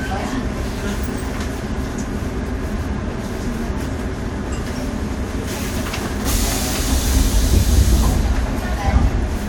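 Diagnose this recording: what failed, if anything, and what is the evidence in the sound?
Nothing in the signal chain has failed: the everyday sounds in this recording arrive intact and continuous, with nothing audible pointing to a fault at any stage from capture to playback.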